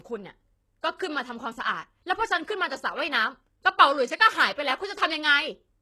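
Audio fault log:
throughout: low-bitrate audio saved at a high bitrate. Nothing is heard above 12.3 kHz. The speech likely passed through a very low-bitrate codec before a high-bitrate re-encode, which cannot restore the lost top.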